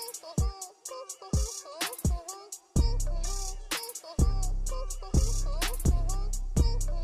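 Nothing in the audio points to a technical fault at any moment in the signal.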